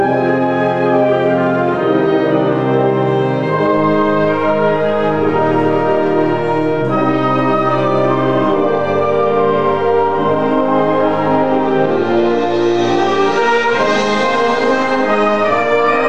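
At 3.77 s the waveform's zero line jumps to a new level in a DC step of about -29 dBFS, and the offset holds to the end of the clip. The shift is heard as a single low thump, while the sound itself carries on unchanged.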